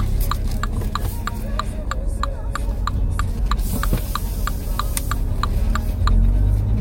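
From 3.38 s to 3.95 s, GSM signalling bursts break into the sound. A 2G phone close by is sending short groups of radio bursts, as it does before a call or text arrives. The audio circuit rectifies that radio energy and turns it into sound. The result is a galloping dit-dit-dit of short buzzes. The buzz repeats at 216.7 Hz. It sits well below the main sound.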